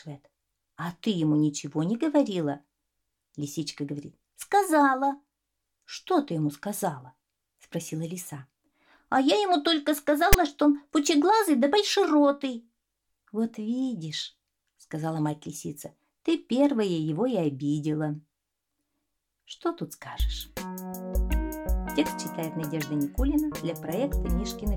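The audio has a brief fault at 10.33 s where file tags are played as audio: a block of text tags is read as samples, giving a loud, hard-edged rasp of static. On the waveform it appears as a sudden dense block pushed to one side of zero; on a spectrogram, as a sharp broadband vertical stripe.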